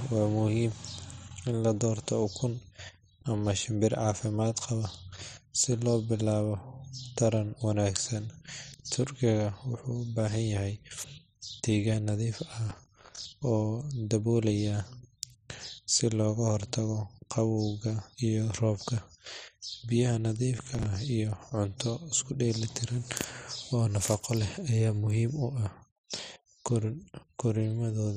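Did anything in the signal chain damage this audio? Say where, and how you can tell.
Yes, at the driver and buffer stage: processor overload crackle from 12.70 to 13.25 s and 20.58 to 20.86 s. The processor kept missing deadlines for short buffers of around 5 ms, replaying stale audio with hard edges, so gritty tearing rides over the speech.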